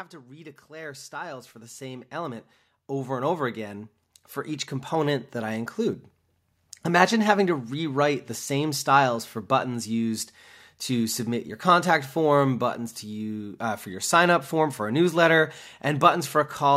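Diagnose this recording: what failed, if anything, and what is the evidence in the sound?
In the call-processing stage, the automatic gain control judged the input too quiet and raised its gain step by step. From 0.1 s to 5.63 s the speech and background swell together, climbing by about 19 dB as the gain ramps up.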